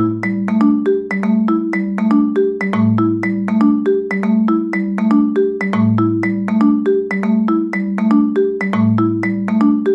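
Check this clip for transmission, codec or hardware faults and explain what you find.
No transmission, codec or hardware faults.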